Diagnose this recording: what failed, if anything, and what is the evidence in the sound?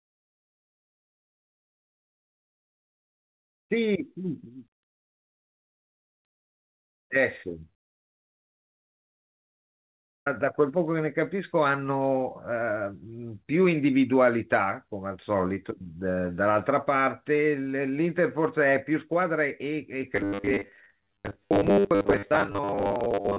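Long network dropout, 8.28 to 10.27 s, in the network stage. The speech stops abruptly and is replaced by almost two seconds of silence with only a brief concealment tail at the start. When the speech returns, roughly 2 s of material is simply gone rather than delayed. This is likely the result of packets failing to arrive for that whole stretch. The receiver had nothing to play, and its concealment gave up after a short fade.

Robotic sound from repeated short buffers, from 20.13 s to the end of the clip, at the buffer stage feeding playback. The speech turns into a rigid metallic buzz locked at 100 Hz while still loosely tracking the syllables. That pitch means a 10 ms segment is being replayed over and over, with about half the audio made of repeats and the real material skipped. The likely cause is audio reaching the jitter buffer too seldom. The repeats sit inside the G.711 band, which stops at 4 kHz.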